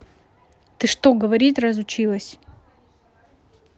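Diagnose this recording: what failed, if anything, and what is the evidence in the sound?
Nothing stood out on listening to this speech recording, so there is no failure to diagnose.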